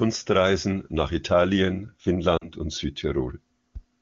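Lost AMR speech frames at 2.37 to 2.49 s break up this wideband speech clip. About 40 ms is missing, which fits two consecutive 20 ms frames failing their checksum. The AMR-WB decoder stretches the last good pitch and vocal tract settings with falling gain, so the sound smears and fades quickly before coming back briefly weak or rough.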